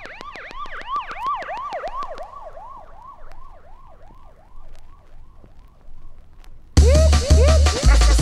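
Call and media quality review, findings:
Train of clicks, 0.06 to 2.19 s: steady ticking over the sound, pauses included, about fifteen near-identical pops at a regular 6.6 per second, peaks around 5 dB above the programme level. Likely cause: interference from nearby equipment or a struggling interface injecting a repeating pulse.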